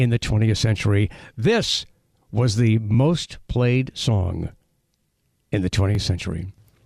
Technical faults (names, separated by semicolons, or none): overlapping chunks